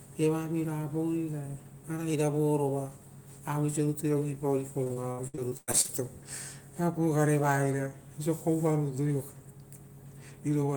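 Repeated packet loss (robotic sound) hits this speech clip from 4.83 to 6.01 s: a rapid string of dropouts, the longest about 0.1 s, each patched by extending the preceding sound, so roughly a third of that stretch is filled-in audio and sounds choppy.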